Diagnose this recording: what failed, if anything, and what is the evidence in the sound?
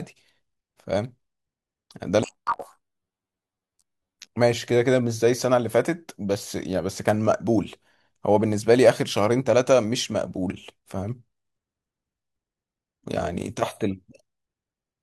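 Between 2.23 and 4.34 s the speech jumps an octave high (12 semitones) and takes on a flutter at about 46.9 Hz, while the overall pace stays normal. This is planar audio read as interleaved, a sample-format conversion fault. Each block holds all left samples, then all right, but is read as alternating pairs, so every block plays twice at double speed. The 21.33 ms flutter period fits a 1024-sample block.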